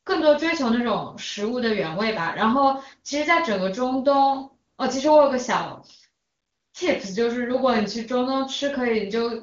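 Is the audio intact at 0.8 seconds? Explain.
Yes, the audio is intact at 0.8 seconds, with no fault at that moment.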